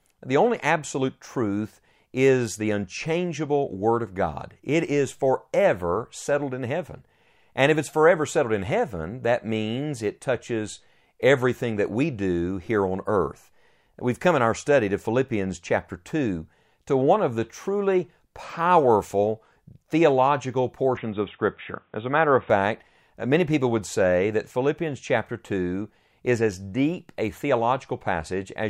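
From 20.97 to 22.50 s the recording likely switched its input to a poorer device, a different microphone or a headset's call profile. That narrower path passes nothing above 3.8 kHz, so the speech turns dull and boxy for that stretch, then opens up again. The change happens with no gap at the switch and no noticeable jump in level, but a faint new noise floor, some 45 dB below the speech, comes in with it.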